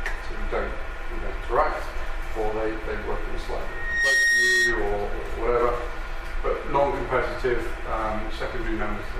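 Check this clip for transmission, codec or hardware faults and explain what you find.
One fault: a loudspeaker feedback squeal from 3.65 to 4.99 s. A microphone re-captures its own loudspeaker, and at 1.9 kHz the loop gain passes unity. The tone swells in under half a second to sit a few dB above the sound. That swelling growth distinguishes it from a steady interference whistle.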